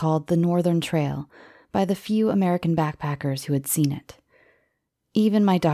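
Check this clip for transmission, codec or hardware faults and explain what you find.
Nothing to report: no faults heard anywhere in this speech.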